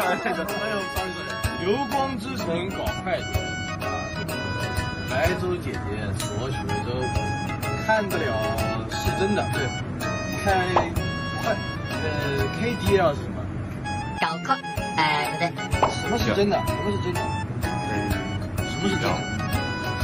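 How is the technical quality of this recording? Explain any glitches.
There is one glitch. From 17.63 to 17.90 s, loose connector crackle: a worn or dirty contact intermittently breaks the signal path, chopping the sound into a short, irregular burst of scratchy crackle.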